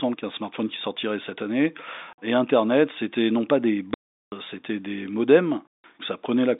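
Packet loss filled with silence cuts the speech three times: 50 ms at 2.13 s after "qui sortirait cette année", 380 ms from 3.94 to 4.32 s after "c'était non pas des", and 170 ms from 5.67 to 5.84 s after "c'était des". Each gap is dead silence with hard edges, unlike concealment, which would smear or repeat sound. The lengths point to 10 ms packets.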